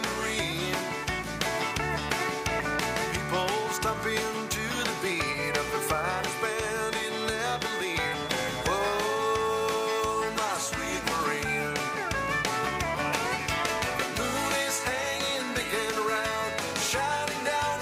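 Likely a loudspeaker-to-microphone loop held right at its feedback point produces a feedback whistle from 6.77 to 10.18 s: a thin, steady tone at 3.4 kHz, roughly 15 dB below the sound, swelling and fading slowly in level without building up.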